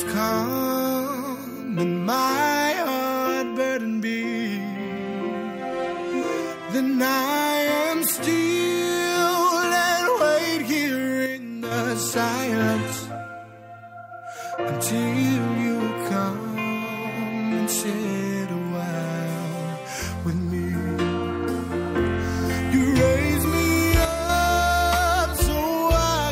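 At 11.26 to 11.71 s and 24.05 to 24.29 s, the sound abruptly drops about 6 dB. One channel likely drops out before the mono sum.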